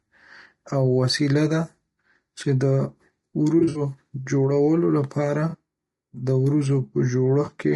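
Throughout this speech clip the voice sounds rough and grainy, with a hiss filling the gaps between harmonics and a thin, synthetic-sounding top band. That is plainly audible codec damage, likely from AAC-ELD low-delay compression, whose short frames resolve pitch poorly at a low rate; the texture fits a bitrate around 32 kbps. There are also three smeared, noisy patches, which are AAC frame loss with concealment. The first runs from 3.59 to 3.81 s, just before "جوړولو لپاره". Its dropouts total about 120 ms, scattered over roughly 160 ms, with the longest gap about 70 ms. The second runs from 5.49 to 5.55 s, just after "جوړولو لپاره", with about 40 ms missing. The third is a 20 ms hole at 7.45 to 7.49 s. In each one the decoder covered the missing audio by reusing the last good spectrum.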